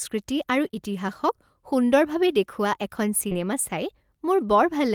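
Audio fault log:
0.67–0.75 s, short concealed packet loss: two back-to-back 20 ms gaps, each bridged by roughly 18 ms of extrapolated sound that continues the preceding pitch or noise and then crossfades back. This gives a brief smeared wobble.
3.29–3.33 s, short concealed packet loss: a single 20 ms gap, patched with about 15 ms of synthesized continuation. It is heard as a short smear or wobble.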